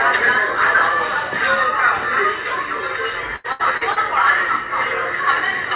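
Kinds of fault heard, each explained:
Repeated packet loss (robotic sound): from 3.36 to 3.99 s, four separate gaps, the longest 80 ms, were each patched by stretching the preceding audio, so about a third of that stretch is concealment, giving a choppy texture with pieces missing through a band-limited call path with nothing above 4 kHz.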